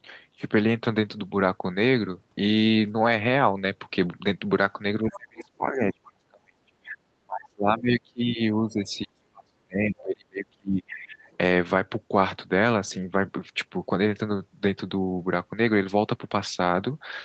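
Speech suppressed in double talk, 5.02 to 7.02 s, 7.2 to 8.4 s and 8.57 to 11.23 s: while both ends talk at once, the talker's level sinks by as much as roughly 35 dB, likely because the echo canceller could not tell near speech from loudspeaker echo and attenuated both. Other side's voice leaking through, 5.12 to 5.17 s, 9.97 to 10.01 s and 11.31 to 11.37 s: brief scraps of a second voice slip past, likely residual echo the canceller failed to remove, sitting roughly 20 to 35 dB below the talker.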